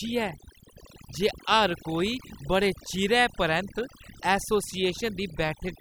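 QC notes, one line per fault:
Throughout, overdone noise removal: the background between phrases drops, broken by twinkling specks that flicker in and out. A noise reduction stage set too hard is the cause. It pulls individual frequency bands down or off whenever they sit close to its noise estimate, so quiet detail in the voice is stripped out along with the noise, and the stray surviving bands become those isolated specks.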